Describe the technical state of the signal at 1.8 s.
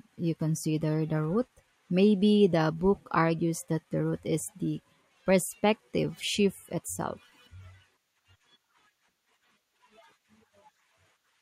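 At 1.8 s the speech signal is intact, with no audible fault at that moment.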